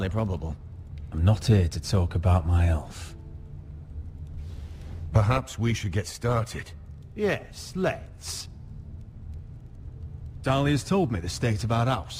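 Nothing stood out as a technical fault anywhere in the recording on listening.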